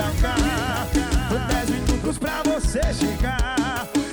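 A second full-band copy of the sound trails the original by roughly 0.7 s and about 5 dB quieter, already present from the start and cutting off abruptly at 2.18 s: a doubled audio track, likely from a slower second capture path mixed back in.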